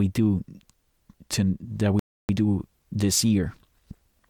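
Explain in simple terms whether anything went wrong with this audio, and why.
A rebuffering stall occurs at 1.99 s: after "to that" the speech cuts to silence while the player waits for data, then resumes at 2.29 s with "do this", adding 0.3 s.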